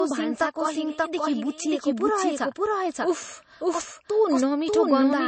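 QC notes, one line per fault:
Throughout: doubled audio track. A second full-band copy of the speech runs about half a second behind the first and at roughly the same loudness, so every phrase is heard twice, cleanly overlapped. Unlike an echo or room reverb, the trailing copy carries no decay, no added room colour and no repeated fading taps. It is one flat duplicate, most likely from the signal being captured again through a slower path.
Throughout: low-bitrate audio saved at a high bitrate. Nothing is present above about 8.3 kHz, and the speech carries the swirly, smeared texture of heavy MP3 coding. That texture points to an original encode at a very low bitrate, around 32 kbit/s, and the file was likely re-encoded as a high-bitrate MP3 of about 233 kbit/s afterwards. A genuinely high-bitrate encode would keep the top band and sound clean. Here the later pass restores none of it.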